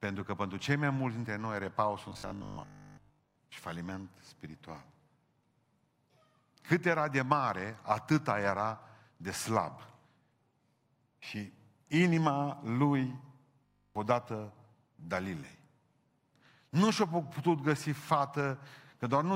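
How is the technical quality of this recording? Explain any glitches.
The recording has two stretches of robotic sound from repeated short buffers, from 2.10 to 3.36 s and from 13.66 to 13.96 s. In both the speech turns into a rigid, metallic buzz at 50 Hz that only loosely tracks the voice. The likely cause is audio arriving too slowly, so the player loops the last 20 ms or so while the real signal is skipped. In the first stretch most of the time is repeated; in the second, all of it. A waveform shows identical 20 ms blocks, and a spectrogram shows evenly spaced harmonics of 50 Hz in place of the natural speech pattern.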